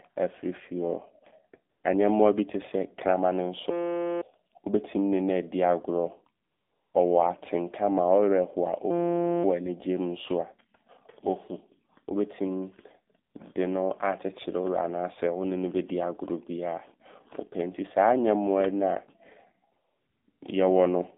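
Throughout the speech, the AMR narrowband mobile codec is plainly audible. The passband runs only from about 200 Hz to 3.6 kHz, so the sound is thin and muffled. The codec rebuilds the voice from a vocal-tract model excited by a handful of pulses per subframe. At this quality it comes across as buzzy and synthetic, which fits a low AMR-NB mode around 7.4 kbps.

AMR comfort noise replaces the real background at 1.70–1.84 s, 6.44–6.94 s, 13.30–13.34 s, 19.72–20.28 s and 20.30–20.42 s. In each gap the transmitter judged the line silent and stopped sending speech frames. The receiver then filled the pause with smooth synthetic noise built from a coarse level and spectrum estimate. That noise switches in and out abruptly against the coded background. The two closely spaced gaps near 20 s produce a brief double toggle.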